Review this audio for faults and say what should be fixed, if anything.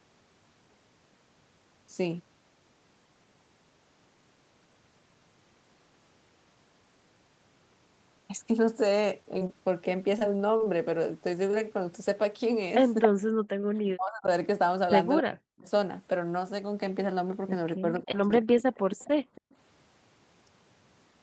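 Short concealed packet loss appears at 9.39 to 9.43 s, 9.47 to 9.51 s and 11.51 to 11.55 s. Each time about 20 ms of audio never arrived, and the decoder continued the preceding sound to fill it. This causes a brief smear or wobble. On a spectrogram the harmonics freeze for a moment, and the waveform shows a short, overly regular patch. Forward error correction or a slightly deeper jitter buffer would cover gaps this small.

Repeated packet loss (robotic sound) runs from 10.19 to 10.68 s. Four separate gaps, the longest 27 ms, were each patched before the next one arrived, so about 17% of that stretch is concealment. It sounds choppy, with pieces missing. The spectrogram shows repeated smeared, comb-like blocks. A more stable network route, with redundancy enabled, would prevent this.

An echo leak appears at 13.02 to 13.08 s, at roughly the same level as the talker, and again at 18.74 to 19.56 s at about 25 dB below. 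Both times a copy of the far side's sound returns 278 ms late. The likely cause is an echo canceller on the loudspeaker side that did not fully remove what its microphone picked up. On a spectrogram it looks like a duplicate of earlier patterns, shifted right. Better canceller tuning or a headset would stop it.

Speech suppressed in double talk occurs across 13.11 to 14.28 s, 15.20 to 15.68 s and 17.77 to 18.55 s. The level drops by as much as roughly 40 dB, over about half a second to 0.7 s each time, likely because the canceller turned everything down while both sides were talking. The waveform shows sudden deep troughs inside active sound. A canceller with proper double-talk detection would fix this.

A short stall from a late packet sits at 13.61 to 13.73 s. A packet arrived about 20 ms late, so the buffer stretched the last sound, then dropped about 5 ms to catch up. It sounds like a held moment. 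A spectrogram shows one frame smeared wider than the others. An adaptive jitter buffer with a bit more headroom would absorb this.

Background gated by the echo canceller runs from 18.87 to 19.44 s, while the loudspeaker side was active. The room tone drops by about 37 dB and then returns. The waveform shows the noise floor collapsing into near-silence, and the spectrogram shows a blank band there. Gentler suppression with comfort noise would keep the background steady.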